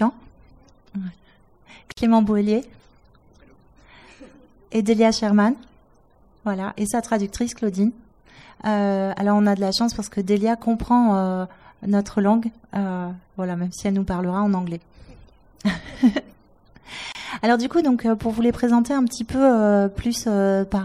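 The audio has two brief dropouts, each a gap at a join of encoded pieces. The first runs from 1.92 to 1.97 s and lasts about 52 ms. The second runs from 17.12 to 17.15 s and lasts about 27 ms. Each time, continuous sound falls silent with smeared edges, then resumes where it stopped. The cause is separately encoded segments spliced without trimming. Each encoder's start-up delay and final-frame padding remain as silence.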